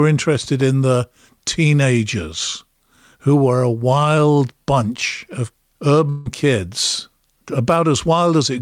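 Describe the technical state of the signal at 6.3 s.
At 6.3 s the speech has just resumed after a likely long network dropout from 6.09 to 6.27 s, following "a wild bunch of". About 160 ms was concealed by a fading continuation of the last sound, and that material never returns.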